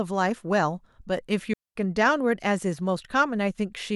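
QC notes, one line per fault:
1.53 to 1.76 s, digital wireless dropout: the speech drops into a clean hole of near silence lasting about 223 ms, with no noise burst on either side. The receiver lost too much of the digital link, muted with a very short fade, then resumed.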